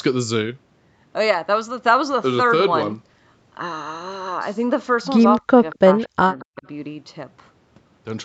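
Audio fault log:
5.38–5.62 s, 5.80–5.84 s, 6.07–6.21 s and 6.39–6.65 s: speech suppressed in double talk. With both sides talking at once, the echo canceller likely could not separate its own talker from the loudspeaker echo, so it turned everything down. The voice falls away sharply, by about 35 dB in the first stretch and about 40 dB in the other three. It cuts out in pieces, losing roughly 200 ms, 40 ms, 150 ms and 200 ms.
5.71–5.76 s: echo leak. A loudspeaker on the other end fed sound back into its microphone, and the echo canceller there likely failed to remove all of it, so some was sent back. The result is a brief, faint scrap of the voice arriving again 229 ms late, about 25 dB below the direct speech. It falls between the first two suppression dips and carries the same 8 kHz upper limit as the rest of the call audio.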